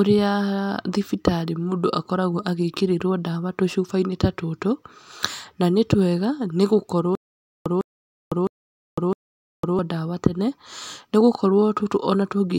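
From 7.15 s to 9.79 s the speech breaks into a stutter with silent gaps: a fragment of about 154 ms plays, then about 505 ms of dead digital silence, and the pair repeats four times at a steady 659 ms period before the speech resumes with "ndawa tene". The likely cause is a stalled player or stream replaying its last buffered fragment on each retry. Unlike a single dropout, the identical burst keeps returning on a regular clock, and the audio for that stretch never arrives.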